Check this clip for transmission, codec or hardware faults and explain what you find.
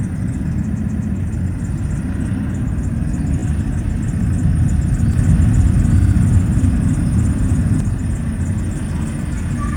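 Two kinds of fault are audible: stuttering from repeated frames at three points, and a doubled audio track in the second half.

Repeated frames, 0.74 to 1.12 s, 3.39 to 3.43 s and 6.00 to 6.13 s: the sound catches and replays itself. The first stutter replays a 128 ms block three extra times, adding 384 ms. The second is a brief flutter, a 16 ms block played twice more, adding 32 ms. The third repeats a 64 ms block twice, adding 128 ms. Each time, the decoder has received a run of compressed frames more than once and plays the same slice again, so the clip runs longer by the repeated time.

Doubled audio track, 5.14 to 7.80 s: a second, full-band copy of the sound trails the original by about a second at roughly the same loudness. Because it is so close in level it reads as a duplicate layered on top, not as an echo. It has no decay or room colour, and it switches in and out abruptly at both ends. 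The likely cause is the same audio being mixed in twice, either captured again through a slower path or left as two out-of-step copies in an edit. The 6.00 s stutter also falls inside this doubled stretch.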